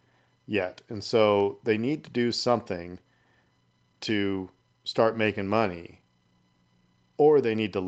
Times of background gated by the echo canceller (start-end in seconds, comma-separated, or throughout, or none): none